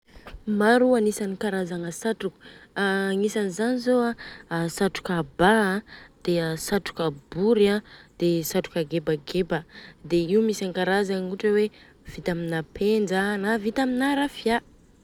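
Listening through the speech recording, nothing stood out as a technical fault at any point.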